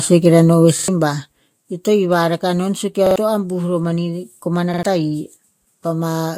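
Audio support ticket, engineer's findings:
Zipper noise, 0.68 to 1.54 s: ticking rides a level drop of about 10 dB, roughly twenty steps a second. Unsmoothed gain stage. Waveform shows staircase envelope; spectrogram, faint vertical lines at each step.

Repeated buffer, 0.79, 3.07, 4.74 s: stuttered 46 ms segment, played twice extra with hard joins, about a tenth of a second lost. Fits a 2048-sample buffer underrun. Waveform shows identical repeating blocks.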